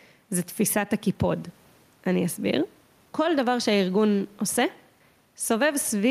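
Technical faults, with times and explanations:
Throughout: gain pumping. Input gain is likely set too high, so a fast limiter clamps down on each loud syllable and lets go in the pauses. The room noise sits about 40 dB under the speech, the gain swings by roughly 5 dB, and the speech sounds squashed.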